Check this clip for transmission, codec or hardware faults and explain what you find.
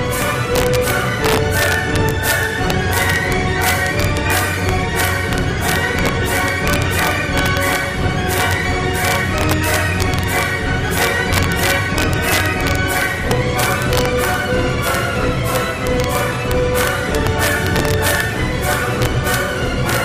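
Integer overflow runs through the whole clip. The signal is driven about 5 dB past the top of the integer range. Those samples are not held at the limit. They wrap around to the opposite sign. Each such peak jumps across the full scale in one step. Only a small fraction of samples goes over, about a fifth of a percent. So the damage sits on the loudest moments. There it is heard as violent cracks, much harsher than ordinary clipping.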